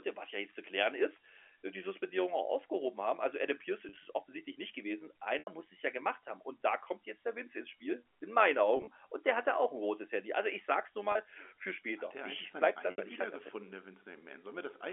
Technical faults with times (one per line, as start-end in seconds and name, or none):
0.00-14.92 overlap-add ripple
3.89-3.97 packet loss with pitch repetition
5.39-5.47 packet loss with pitch repetition
8.77-8.87 packet loss with pitch repetition
11.12-11.15 packet loss with pitch repetition
12.91-12.98 packet loss with pitch repetition